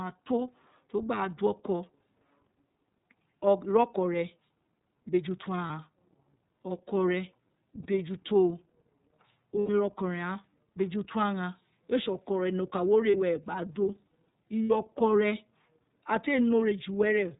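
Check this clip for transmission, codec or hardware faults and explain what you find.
Two faults are audible in the speech: iLBC codec coding throughout, and five short dropouts from lost iLBC frames.

The iLBC codec is present for the whole clip. Each frame's excitation is coded independently, leaving plainly audible synthetic roughness, consistent with the 13.33 kbps, 30 ms mode. On a spectrogram, energy stops sharply at 4 kHz.

Lost iLBC frames occur at 5.67 s (30 ms), 7.83 s (30 ms), 9.60 s (90 ms), 13.11 s (30 ms) and 14.65 s (60 ms). The lengths fit whole 30 ms frames. Concealment repeats the last pitch cycle with noise, so each gap sounds like a brief held, buzzy vowel. On a spectrogram, these appear as flat, smeared harmonic stretches, and the waveform shows repeated cycles before normal speech resumes almost at once.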